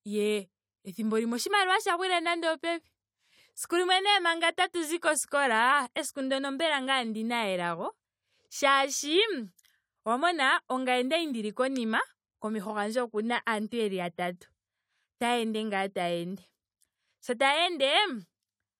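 No technical faults can be heard anywhere in the speech recording. There is nothing to place in time order, because no event at any point alters or interrupts the signal.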